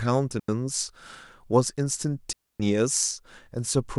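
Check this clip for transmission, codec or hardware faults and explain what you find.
Two digital wireless dropouts occur, at 0.40–0.48 s (87 ms) and 2.33–2.60 s (269 ms). Each time the receiver lost too much data and muted behind a very short fade, leaving a clean gap of near silence in the speech with no noise burst on either side.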